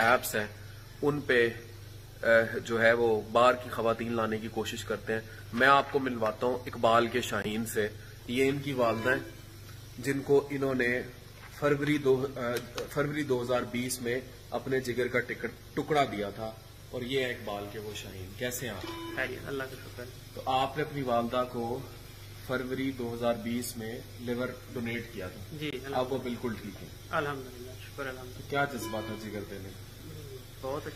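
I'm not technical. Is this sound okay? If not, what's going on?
No. The sound cuts out twice, at 7.42 to 7.46 s and 25.71 to 25.74 s. Each gap is brief silence. This is likely a Bluetooth dropout, where one audio packet arrived too late.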